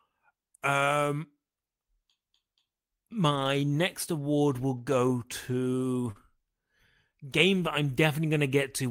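At 4.77 s, right after "next award will", comes a lost packet rebuilt from error correction. One 20 ms packet went missing. The next packet carried a low-bitrate copy of it. The decoder played that copy, so there is no gap. That instant sounds briefly rougher and noisier.

From 6.11 to 6.17 s there is a short concealed packet loss. About 40 ms arrived too late to decode. The receiver extended the preceding sound to fill the hole, then blended back. It comes across as a brief smear or wobble.

Overlapping its tail, from 6.15 to 6.17 s, the last 20 ms packet of that stretch was rebuilt from error correction. Its low-bitrate copy came through, so the end of the smear carries the same rough, noisy texture as the earlier repair.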